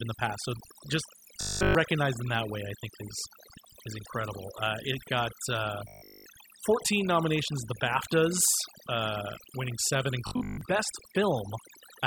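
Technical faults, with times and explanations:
Throughout, overdone noise removal: the background drops with twinkling specks, because single frequency bands near the noise estimate are cut hard. A spectrogram shows isolated bright dots scattered over an almost black floor.
1.41–1.75 s, 5.88–6.26 s and 10.27–10.61 s, robotic sound from repeated short buffers: the speech turns into a rigid metallic 50 Hz buzz, likely from a 20 ms piece being replayed in place of new audio. This fills the first two spans fully and most of the third. The waveform shows repeating 20 ms cycles, and the spectrogram shows evenly spaced horizontal harmonic lines.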